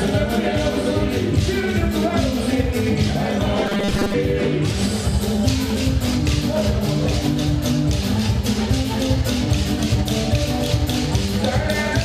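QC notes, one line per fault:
3.67–4.14 s, robotic sound from repeated short buffers: a rigid, metallic 200 Hz buzz, likely a 5 ms buffer repeating over most of this stretch.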